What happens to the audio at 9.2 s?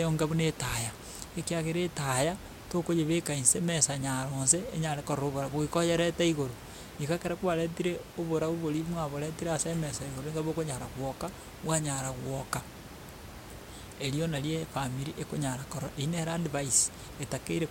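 At 9.2 s the audio is intact, with only the room noise, about 15 dB below the speech, under it.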